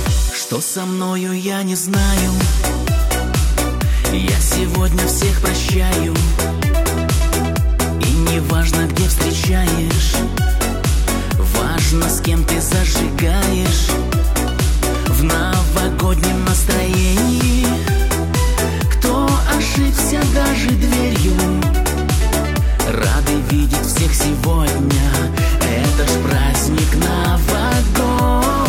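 No technical faults can be heard in this recording. There is nothing here that needs a timestamp or a fix.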